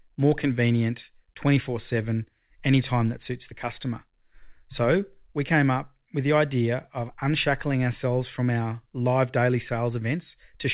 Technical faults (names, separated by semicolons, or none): none